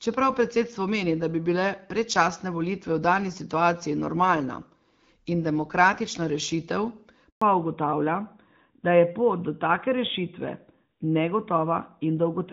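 Right after "in demokratična rešitev", at 7.30 s, there's a handover gap: the call hops networks and no speech frames get through for 120 ms, until 7.42 s. The sound drops away almost instantly and there's just dead silence until the new link picks up.

From 7.42 s to the end, there's a fallback to narrowband. The HD Voice link, which sounds like light AMR-WB coding around 12.65 kbit/s, gives way to what sounds like AMR-NB at roughly 12.2 kbit/s. Nothing above 4 kHz survives, so the speech turns duller and rougher.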